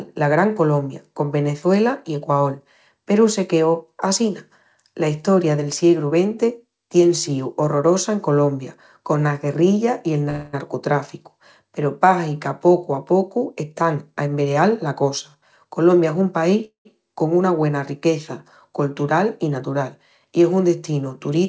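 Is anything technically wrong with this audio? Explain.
Yes, there are two kinds of fault.

Call audio freeze, at 10.30 to 10.55 s (just after "i el") and 16.65 to 16.87 s: packets were likely delayed and the jitter buffer ran dry. The receiver stretched the last sound into a fading buzz or hiss, filling about 230 ms and then about 200 ms, the second ending in roughly 120 ms of silence. The audio then resumes where it stopped, with nothing lost.

Jitter buffer speed-up, from 13.72 to 16.22 s: the buffer held too much audio, so the receiver trimmed many short pitch-period pieces, removing around 0.2 s. The sound plays at 108% speed at unchanged pitch and comes across as hurried.

All of this comes through a call path whose bandwidth stops at 8 kHz, which fits G.722 at 64 kbps.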